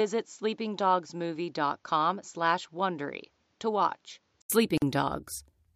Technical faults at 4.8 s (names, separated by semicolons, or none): gap at a join of encoded pieces